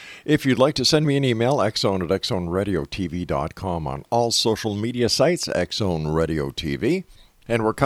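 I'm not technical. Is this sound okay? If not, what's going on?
Yes, nothing in this recording points to a technical problem. It's speech, and no dropouts, clicks, distortion or other glitches can be heard at any point.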